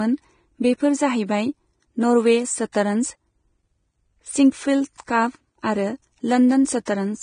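All the way through, the speech sounds hissy and grainy, with nothing above 9.7 kHz. That's likely Vorbis compression, heavy damage that fits a bitrate around 22 kbps.

Pre-echo shows up at 2.72–2.75 s right after "बेफोर जाहैबाय नर्वे", then at 4.97–5.00 s and 6.85–6.87 s. Block-spread quantisation noise smears a brief hiss, about 20–30 ms long, ahead of each sharp attack.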